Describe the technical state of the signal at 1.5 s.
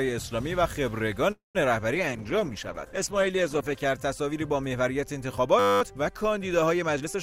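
At 1.5 s the signal is inside a call audio freeze running from 1.31 to 1.57 s. The last sound is stretched into a fading buzz that drops to silence for about 140 ms, likely from a drained jitter buffer. Playback then resumes intact, about 233 ms late.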